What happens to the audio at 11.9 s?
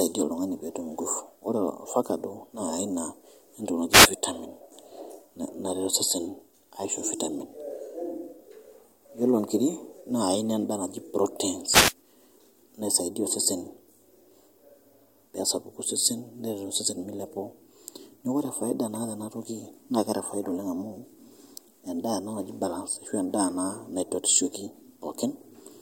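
At 11.9 s the speech is caught in a wireless microphone noise hit lasting from 11.69 to 11.94 s, about a quarter of a second. The FM radio link from the microphone briefly faded as reflected signals cancelled, so the receiver's own noise swelled and broke into a short swish of static over the voice. Unlike a digital dropout, which leaves a hard gap of silence or a repeated fragment, this fault is a hissy burst that rises and falls.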